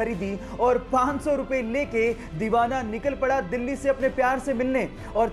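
Nothing here stands out as a technical problem; the audio just runs along without anything going wrong at any point.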